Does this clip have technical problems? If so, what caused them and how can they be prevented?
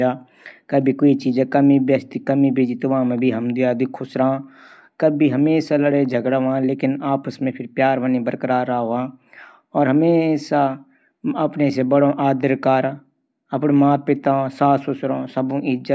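No, there are no technical problems to prevent here.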